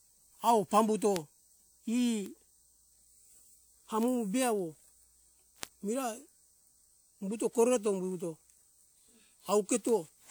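Six bit error spikes tick through the speech, at 1.16 s just after "awo pambuto", then 2.26, 4.03, 5.63, 7.73 and 9.89 s. Each is a flipped bit jumping a sample or a few by a power of two, giving one sharp, broadband tick unrelated to the speech.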